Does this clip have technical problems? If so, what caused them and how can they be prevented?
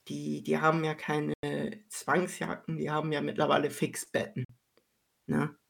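Yes. The speech drops to silence twice, for 93 ms at 1.34 s just after "die die haben ja" and for 46 ms at 4.45 s, then resumes further on. This is likely a Bluetooth dropout, with packets arriving too late and being discarded. Keeping the source close, with a clear line of sight and little 2.4 GHz congestion, prevents it.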